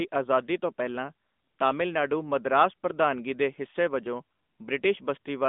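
Throughout, the speech carries AMR narrowband mobile codec damage, plainly audible. A pulse-excited vocal-tract model rebuilds each frame, leaving a buzzy, synthetic edge that fits a mid-rate mode near 10 kbps. A spectrogram shows energy confined between 200 Hz and 3.6 kHz, with nothing above 3.8 kHz.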